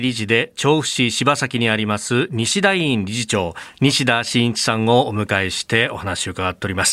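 Nothing stood out on listening to the speech here; no moment calls for comment.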